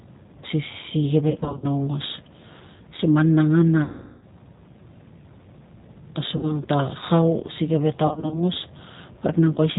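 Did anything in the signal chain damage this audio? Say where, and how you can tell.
Yes. At the codec stage, G.729 coding runs through the whole speech clip: a rough, slightly synthetic texture and a hard band limit. On a spectrogram nothing sits above 4 kHz. The predictor-and-pulse reconstruction at 8 kbit/s leaves a grainy harmonic structure.

At the network stage, VoIP packet loss concealed by the speech codec causes dropouts at 1.30–1.66 s (160 ms lost, scattered), 3.84–4.23 s (380 ms), 6.37–6.57 s (60 ms) and 8.07–8.42 s (120 ms, scattered). Each gap turns into an extrapolated buzzy tone or coloured noise that fades. On a spectrogram these show as smeared, repeated harmonics, and on a waveform as decaying envelopes.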